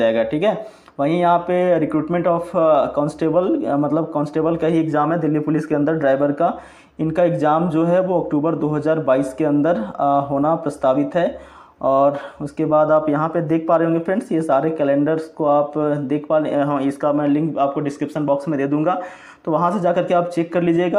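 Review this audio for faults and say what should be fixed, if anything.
Nothing here needs fixing.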